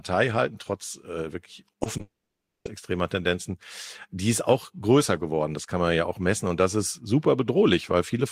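At 1.71 to 1.75 s, 1.83 to 1.87 s and 1.97 to 2.01 s the speech is hit by three short concealed packet losses. Each time roughly 20 ms of audio failed to arrive, and the decoder bridged the hole by extending the preceding sound before fading back into real signal. Each one is heard as a quick smear or wobble. On a spectrogram the harmonics run briefly flat and blurred, and the waveform shows a slightly too-regular repeated cycle.

From 2.01 to 2.67 s there is a long network dropout, likely caused by a stall in the connection, since the receiver had nothing to play for about 0.64 s. The first fraction of that gap is filled by a fading buzz or hiss continuing the last sound. The remaining 560 ms or so is silence before speech resumes with that stretch missing. A spectrogram shows a brief smeared tail, then an empty band, and the waveform flattens to a line.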